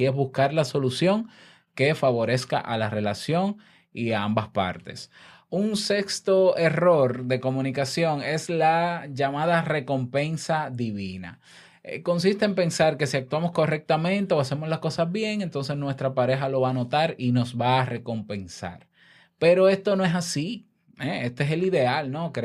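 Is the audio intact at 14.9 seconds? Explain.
Yes, the speech at 14.9 seconds plays through cleanly, with no dropout, glitch or other audible fault at that moment.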